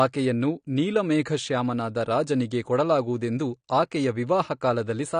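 From start to end the speech is band-limited, with nothing above 9.7 kHz, and sounds dull with a smeared, watery texture on sustained sounds and sibilants. The likely cause is AAC compression, with coarse quantisation and a lowered cut-off that fit an AAC-LC encode near 32 kbps.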